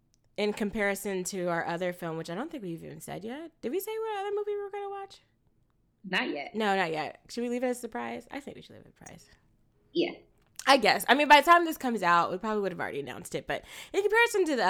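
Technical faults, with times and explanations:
Nothing technical trips up this speech recording; there's simply no fault to point to at any moment.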